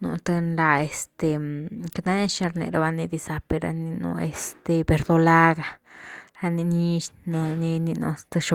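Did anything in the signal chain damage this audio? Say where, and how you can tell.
No, nothing here is damaged.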